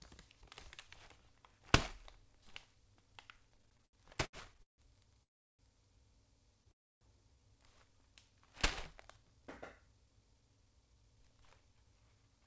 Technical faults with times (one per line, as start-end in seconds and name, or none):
3.47-4.81 repeated stalls (stutter)
5.23-5.62 call audio freeze
6.71-7.04 call audio freeze
9.17-12.46 jitter buffer speed-up